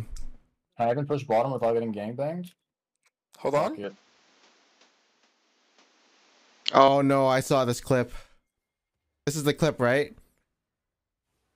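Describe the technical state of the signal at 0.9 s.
At 0.9 s the signal is intact, with no audible fault at that moment.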